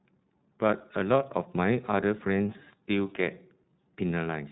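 From start to finish the speech carries iLBC codec damage, plainly audible as a rough, slightly synthetic texture. Each short frame's excitation is coded on its own, and the roughness fits the 13.33 kbps mode with its 30 ms frames. Nothing above 3.8 kHz survives, so sibilants sound dull and boxed-in. A spectrogram shows a hard ceiling at 3.8 kHz with empty space above, and slightly blocky harmonic detail below.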